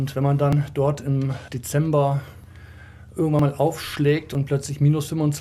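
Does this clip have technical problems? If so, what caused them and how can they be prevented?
Yes, there are short skips at 0.53, 2.44, 3.39 and 4.35 s, each losing about 40 ms. That's likely audio missing between chunks, with roughly one-second chunks dropping a sliver at each handover. Fix it with gapless, overlapping buffering between chunks.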